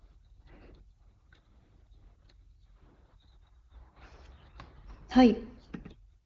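Nothing here is technically wrong: it's a speech recording carried over AMR wideband (HD Voice), with the sound stopping around 7.1 kHz as that codec's band limit would have it, and no faults turn up anywhere along the way.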